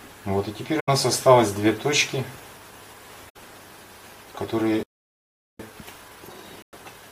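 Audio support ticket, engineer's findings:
AAC frame loss with muting, three events. 0.79 to 0.89 s: soft-edged gap of about 85 ms, consistent with four lost frames. 3.29 to 3.36 s: about 64 ms hole, three frames. 6.63 to 6.74 s: about 107 ms, five frames. Decoder zeroed the spectrum of missing frames; overlapping transform windows taper the audio out and back in, so the holes fade rather than cut.

Playback stall, 4.83 to 5.60 s. Audio stops mid-flow for about 0.76 s, then resumes where it left off. Likely cause: player buffer underrun or a blocked output thread; output held silent until data or scheduling recovered.

Time-compressed catch-up, 5.60 s to end. Audio runs hurried at 1.1x with pitch unchanged. Player draining the backlog built during the stall by excising short segments and cross-fading the joins. Third frame-loss gap falls inside this section.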